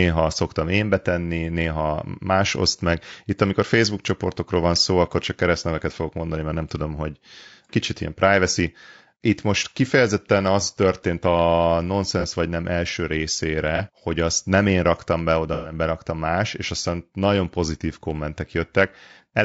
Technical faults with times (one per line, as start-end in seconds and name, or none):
0.00-19.45 low-delay AAC compression
12.20-12.25 AAC frame loss with concealment
13.76-13.80 AAC frame loss with concealment
15.53-15.73 AAC frame loss with concealment